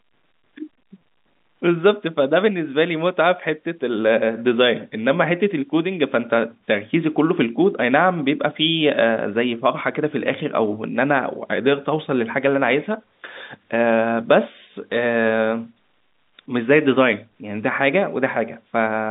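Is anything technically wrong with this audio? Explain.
No, nothing stood out on listening to this speech, which carries the narrow band of ordinary G.711 telephone coding with nothing heard above about 3.8 kHz.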